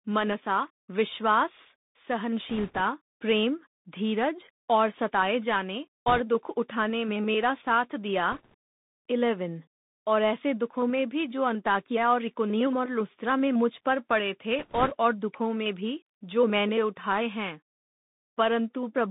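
The whole clip is speech carried through a Bluetooth CVSD headset codec. Nothing passes below about 150 Hz or above 3.7 kHz, so the sound is thin and narrowband. The one-bit delta coding, which fits a 64 kbps link, leaves a granular hiss. S sounds turn scratchy.

Bit errors on the Bluetooth voice link come in bursts at 2.49 to 2.81 s, 6.08 to 6.21 s, 8.32 to 8.54 s and 14.59 to 14.93 s. Each flipped bit moves the decoded level only a little, so no sharp clicks appear. Instead, a rushing, crackly noise rides on the speech. It points to an error rate of a few percent.

From 13.76 to 17.57 s, a switching supply whistle sits in the background. It is a faint high tone drifting between 5.36 and 5.46 kHz, around 40 dB below the speech. A power supply running in an audible burst mode or beating with another one produces it.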